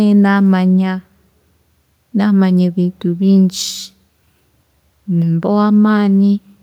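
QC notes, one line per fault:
No faults to note for QC.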